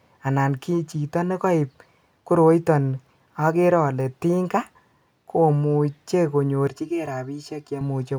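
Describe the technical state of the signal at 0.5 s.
At 0.5 s the speech signal is intact, with no technical fault present at that moment.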